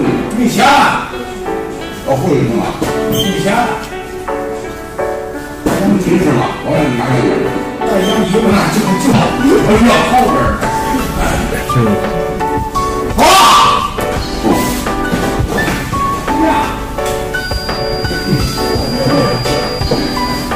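Hard clipping runs through the whole clip. The signal is driven about 19 dB past what a stage in the chain can pass, so a few percent of samples hit the ceiling and are cut flat. The result is a harsh fuzz on every loud moment, not an occasional crackle. On the waveform, peaks form flat plateaus. On a spectrogram, each loud passage spreads a haze of harmonics high up the spectrum.

From 17.33 s to the end, a thin, steady whistle at 4.8 kHz sits behind the sound, roughly 15 dB below it and swelling and fading slowly in level. This is a feedback whistle, most likely a loudspeaker-to-microphone loop held just short of runaway so that a single frequency keeps ringing. A spectrogram shows it as one narrow horizontal line at 4.8 kHz with slowly fluctuating brightness. It doesn't stand out on the waveform, buried under the clipped material.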